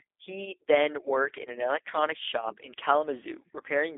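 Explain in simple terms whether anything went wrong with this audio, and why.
G.729 codec damage runs through the whole clip. The speech was squeezed through a phone-call voice codec that rebuilds the voice from a simplified model of the throat and a few pulses, so it sounds rough and synthetic. Everything above about 3.7 kHz is gone, leaving it muffled and thin.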